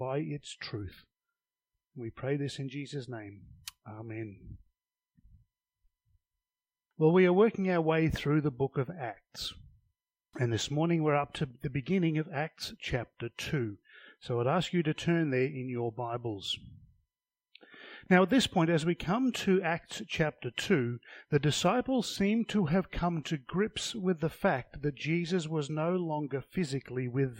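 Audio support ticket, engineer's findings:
No faults found on listening; nothing to escalate.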